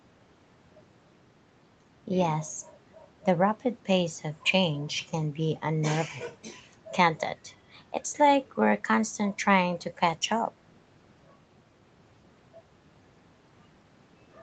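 No technical faults can be heard in this speech.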